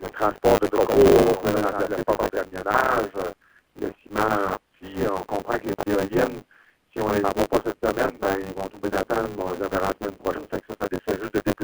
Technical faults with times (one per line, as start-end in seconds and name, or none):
0.00-11.64 buffer tearing
0.67-2.39 doubled audio track
5.80 compressed frames skipped